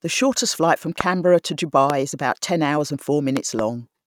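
Sharp loud pops sit on top of the speech, which carries on underneath. The first, from 1.01 to 1.03 s just after "shortest flight from", is the strongest, far above the speech level. A second single pop follows at 1.90 to 1.92 s, right before "is about ten hours". After "about ten hours and", two pops land in quick succession between 3.37 and 3.61 s. Each is likely a sudden voltage pulse from a plug, switch or static discharge, briefly shaped by the circuitry after it.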